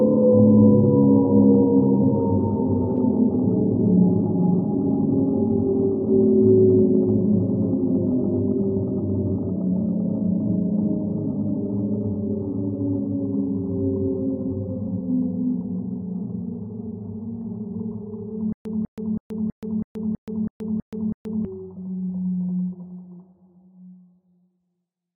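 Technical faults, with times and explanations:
18.53–21.45 s, stutter with silent gaps: the same fragment of about 0.2 s (197 ms) plays, then drops into dead digital silence for about 0.13 s (128 ms), and this returns on an even beat every 0.32 s, nine repeats in all, giving a mechanical stammer. The likely cause is a stalled player or stream that replays its last buffered fragment on each retry and then runs empty, so the sound meant for those three seconds never arrives.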